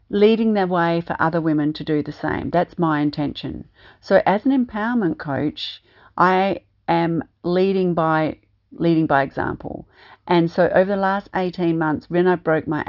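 No technical faults can be heard anywhere in the speech. Nothing in the audio calls for comment at any point in time.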